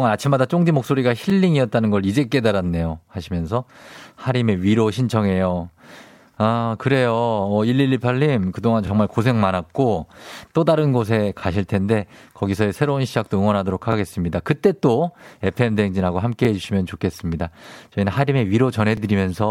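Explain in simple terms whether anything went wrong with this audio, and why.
The speech has overlapping chunks. It was handled in pieces of about 2.5 seconds, each starting slightly early, so about 25 ms plays twice at every join. This causes brief stutters at 1.30, 3.82, 6.35, 8.87, 11.40, 13.92, 16.45 and 18.97 seconds.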